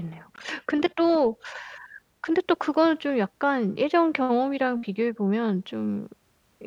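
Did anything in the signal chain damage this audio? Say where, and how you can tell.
Yes: at 0.36 s the speech cuts to silence for 18 ms and resumes, likely a Bluetooth stall where the wireless link briefly starved the headphones' buffer.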